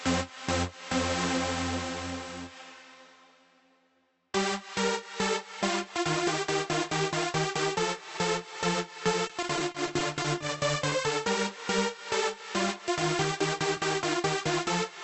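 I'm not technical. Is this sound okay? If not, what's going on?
No. From 9.27 to 10.42 s there is repeated packet loss, which gives a robotic sound. Around nine tiny pieces of the audio went missing, each no longer than 20 ms. Each time, the receiving end filled the hole by stretching the last bit of sound, which makes that stretch choppy.

Shortly after, from 10.90 to 10.94 s, there is a short concealed packet loss. About 20 ms of audio never arrived and was patched over by continuing the preceding sound, so you may hear a brief smear or wobble there.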